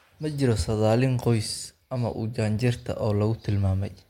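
There are no technical faults to describe in this speech clip.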